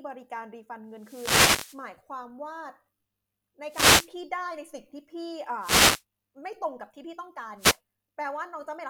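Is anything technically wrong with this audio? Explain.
Yes. Wireless microphone noise hits occur at 0.93–1.88, 3.69–4.11, 5.59–6.03 and 7.57–7.79 s. The analogue FM radio link fades as reflected signals cancel, letting receiver noise rise and partly mask the speech as brief swishes or bursts of static.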